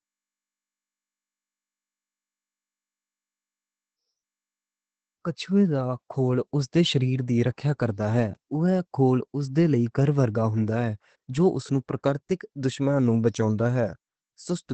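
Throughout the speech, Opus voice compression is plainly audible: nothing remains above 8.4 kHz, consistent with SILK's wideband mode, and the coarsely coded excitation leaves the voice muffled, hoarse and faintly robotic, which points to a low bitrate around 12 kbps.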